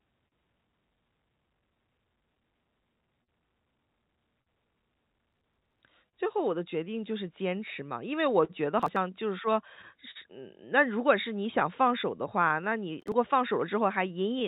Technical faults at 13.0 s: clock drift between sender and receiver; scattered short gaps; processor overload crackle

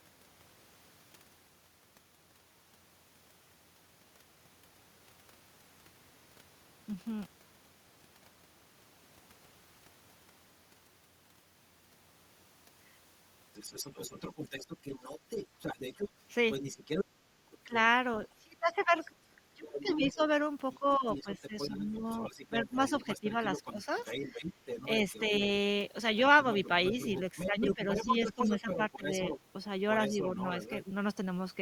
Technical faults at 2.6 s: none

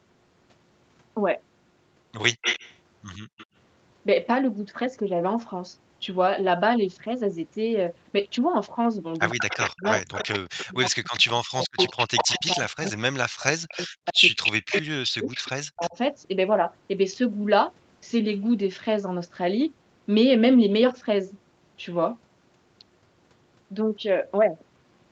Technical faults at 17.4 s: none

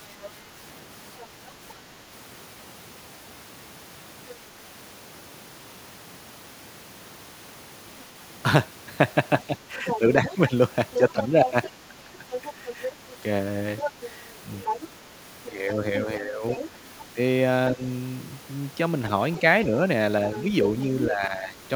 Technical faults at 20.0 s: other side's voice leaking through

